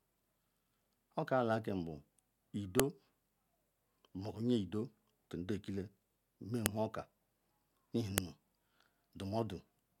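Sharp, loud clicks snap out of the speech at 2.80 s, 6.66 s and 8.18 s. Each is a file header played as audio. Separate WAV pieces were joined without stripping their headers. Those header bytes then play as raw samples at each join.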